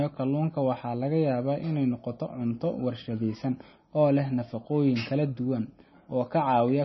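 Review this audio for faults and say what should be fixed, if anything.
Throughout the speech, the treble stops dead at 5.9 kHz, and the sound is watery and swirly, with chirpy, metallic s sounds and smeared consonant attacks. This is likely heavy MP3 compression at a bitrate around 24 kbps. Short of bits, the encoder drops everything above a fixed ceiling and zeroes faint frequency lines frame by frame. On a spectrogram there is a flat horizontal edge at 5.9 kHz with flickering gaps just beneath it. To prevent this, keep a lossless master and encode at a much higher bitrate.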